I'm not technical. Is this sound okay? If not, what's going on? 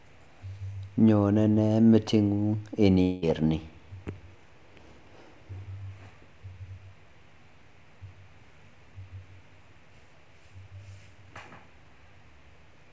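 No. At 3.02 s the speech breaks for about a fifth of a second, until 3.24 s. This is a long network dropout, most likely caused by the connection briefly failing to deliver audio. Instead of going silent, the gap is filled with a smeared, buzzy stretch of the last sound that fades away, and that part of the speech is lost for good. That fading fill is what sets it apart from a simple click or a clean mute. The muffled top end comes from the call connection itself, which carries nothing above 8 kHz.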